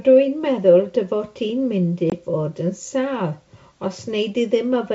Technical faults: packet loss on an ADPCM call

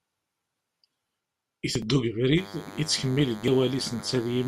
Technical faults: DECT cordless phone buzz

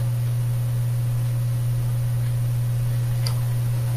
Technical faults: none

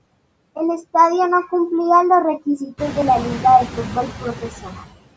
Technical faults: noise suppressor artifacts

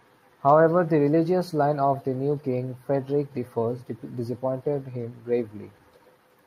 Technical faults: none

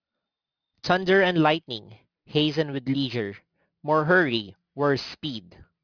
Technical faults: aliasing

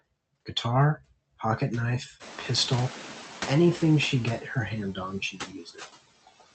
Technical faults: noise suppressor artifacts; noise suppressor catching up; speech cut by the noise suppressor

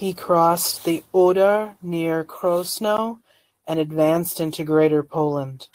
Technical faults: block of digital silence

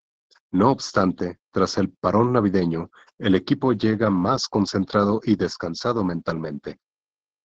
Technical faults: Opus voice compression

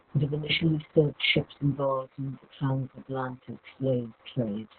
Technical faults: Opus voice compression; time-stretched section

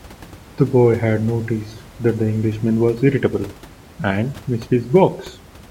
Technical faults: none

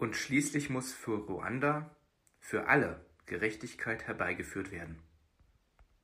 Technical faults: none

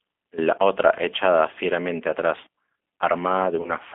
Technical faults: G.729 codec; VoIP packet loss concealed by the speech codec

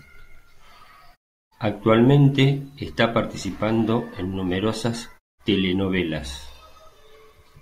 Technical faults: none

